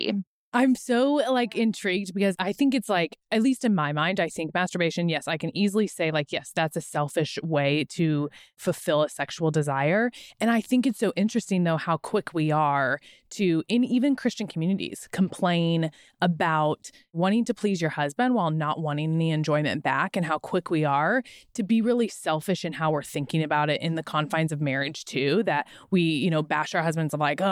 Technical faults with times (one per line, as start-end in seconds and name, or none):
none